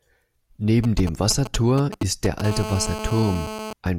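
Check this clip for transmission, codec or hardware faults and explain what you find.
Two hardware faults, both from a nearby 2G phone whose transmissions are being picked up and rectified by the audio circuitry, run through most of this speech clip.

From 0.84 to 2.42 s there are GSM signalling bursts. A phone close by is exchanging short groups of radio bursts with the network, as it does while setting up, and the circuit demodulates each group into audio. The result is a galloping dit-dit-dit of brief 217 Hz buzzes, roughly 10 dB below the speech, arriving in clusters.

From 2.44 to 3.73 s this turns into a continuous GSM phone buzz. The phone has moved into a call and now transmits its time-slot bursts steadily at 217 per second, and the audio path rectifies every pulse. What comes through is a hard, raspy 217 Hz buzz rich in harmonics, about 9 dB below the speech, nearly steady in level and unrelated to it.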